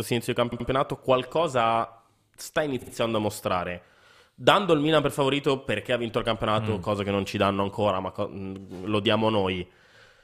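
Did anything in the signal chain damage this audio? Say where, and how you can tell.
Yes, repeated frames at the codec or storage stage. After "sia inizio di" (0.51–0.67 s) a 78 ms chunk stutters twice more; after "qualcosa sta" (2.81–2.91 s) a 52 ms chunk does the same.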